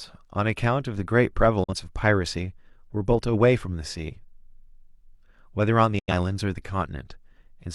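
A digital broadcast dropout at 1.64 to 1.73 s, then again at 5.99 to 6.12 s, cuts the speech into silence after a quick fade of 8 ms. The receiver muted while frames were missing or corrupt. The gaps point to one lost frame and then two.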